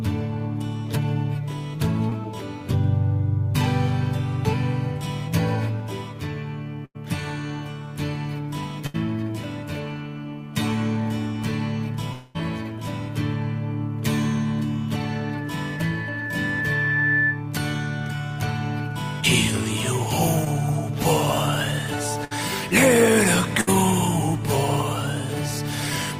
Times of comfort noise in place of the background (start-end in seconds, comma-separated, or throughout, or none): none